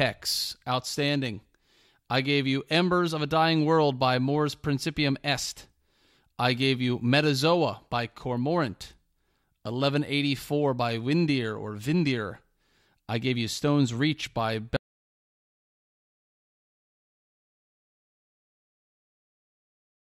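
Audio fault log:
14.77 s to end, audio dropout to silence: the speech cuts off mid-flow and never returns, most likely because the input was lost while recording continued writing zeros. The waveform drops to a flat line, and the spectrogram goes completely blank, with no room tone.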